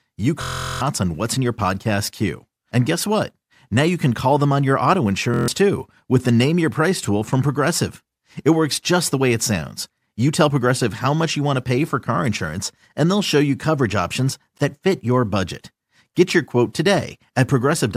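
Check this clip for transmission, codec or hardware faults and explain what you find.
Three faults of two kinds are present: two system hang loops and one instance of repeated frames.

System hang loop, 0.42 to 0.81 s (just before "on what's in your") and 5.34 to 5.48 s (between "them on your auto" and "too with the"). The playback side stalled while the hardware kept replaying a 23.22 ms ring buffer, which fits a 1024-sample buffer. That yields a steady 43.1 Hz buzz: 17 repeats in the first, swallowing roughly 0.4 s of audio, and 6 repeats in the second, losing about 0.15 s.

Repeated frames, 14.57 to 14.60 s, between "show you coverage options" and "that fit your budget". One 26.1 ms compressed block was delivered twice, so the decoder played the same slice again. The result is a brief stutter that lengthens the audio by 26.1 ms.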